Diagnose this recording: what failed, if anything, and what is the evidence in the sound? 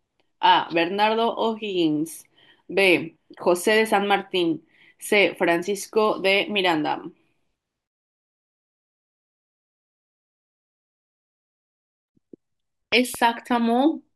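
A loud pop, heard as two sharp thumps between 12.92 and 13.17 s, peaks about 10 dB above the speech, which carries on underneath. The waveform shows tall isolated spikes, and the spectrogram shows thin broadband vertical stripes. The likely cause is a voltage transient in the analogue wiring.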